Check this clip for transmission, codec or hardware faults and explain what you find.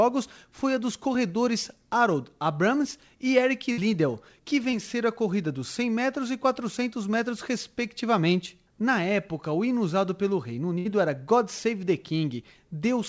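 There are transmission faults: two bursts of packet loss and one short concealed packet loss. Everything sits below 8 kHz, consistent with a G.722 call codec at 64 kbps.

Burst of packet loss, 3.72 to 3.79 s and 10.78 to 10.87 s: about 60 ms never arrived. The receiver stretched the last sound into a fading buzz or hiss, then jumped ahead.

Short concealed packet loss, 4.71 to 4.74 s: roughly 20 ms went missing. The decoder patched it by extrapolation, leaving a quick smear or wobble before blending back in.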